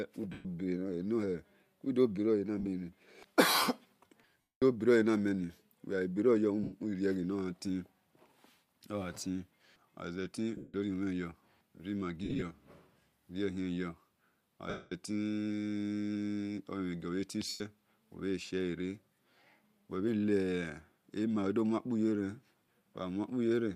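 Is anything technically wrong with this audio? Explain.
Yes. The speech breaks into a brief noisy smear eight times: 0.32–0.45 s, 2.59–2.68 s, 4.41–4.62 s, 6.63–6.72 s, 10.57–10.74 s, 12.24–12.42 s, 14.70–14.92 s, and 17.49–17.61 s, between "gio bhe zeti" and "ubhe shiele". At 2.59 s and 12.24 s the gaps are scattered bursts, the longest about 30 ms and 70 ms. These are lost LE Audio frames. For each missing frame, the decoder repeats the last spectrum with randomised signs, which turns voiced sound into hiss. In the longest gaps, about 210 ms at 4.41 s and 14.70 s, that hiss fades away. The gap lengths fit 7.5 ms frames, likely from LC3 at 64 kbps.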